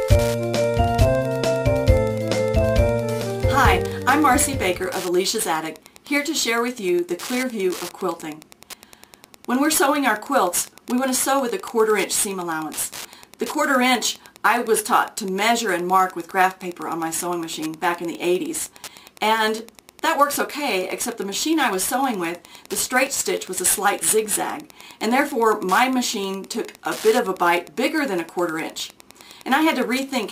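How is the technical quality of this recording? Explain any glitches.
The recording is marred by one fault that runs through the whole clip.

Wi-Fi interference, present from start to finish: a nearby Wi-Fi radio's beacon, sent every 102.4 ms, is rectified by the audio circuitry, producing a steady ticking just under ten times a second, roughly 25 dB below the wanted sound.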